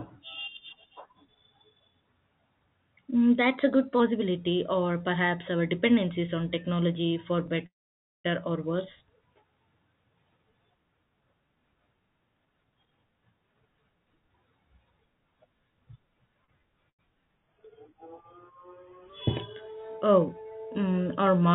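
Speech over a narrowband call line with nothing above 4 kHz, which fits G.711 mu-law at 64 kbps, has several faults. Right after "dependencies on technology for", the sound stops from 7.66 to 8.26 s: a brief fading tail, then about 0.54 s of silence before it resumes with nothing lost. This is a call audio freeze, likely caused by packets delayed long enough to empty the jitter buffer, leaving a 0.58 s gap. From 12.45 to 14.66 s the speech sounds hurried, running at 124% speed with unchanged pitch. That is a jitter buffer speed-up, where the receiver cut roughly half a second of pitch-period slices to shed excess delay. At 16.44 to 16.60 s and again at 16.90 to 17.09 s, a sound is briefly held too long with a slight buzz or dip. Each is a short stall from a late packet: the buffer ran dry and the last sound was stretched, by 38 ms and 92 ms, until the packet arrived.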